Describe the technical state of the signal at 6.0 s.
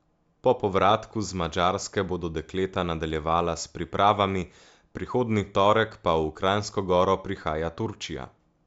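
At 6.0 s the speech signal is intact, with no fault to be heard at that moment.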